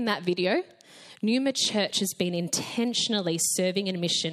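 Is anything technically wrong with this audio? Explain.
No, nothing here sounds technically off, so there's no problem to point to.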